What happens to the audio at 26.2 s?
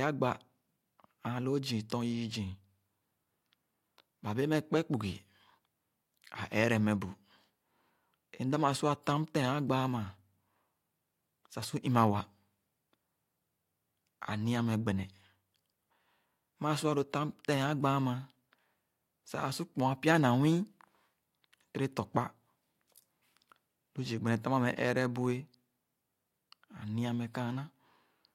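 Nothing goes wrong at 26.2 s; the speech there plays through intact, with no dropout, click, distortion or other fault at that point.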